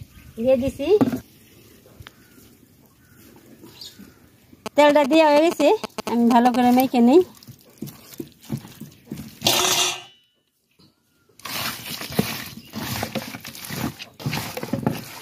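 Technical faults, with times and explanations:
4.66–6.56 s: GSM signalling bursts. A nearby 2G phone's radio bursts are rectified. They give a galloping dit-dit-dit of short 216.7 Hz buzzes, nearly as loud as the sound.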